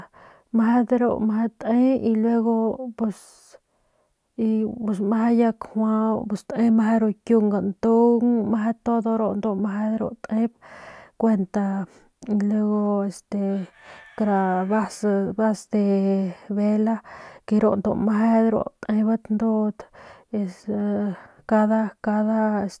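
No technical faults occur at any point in the recording.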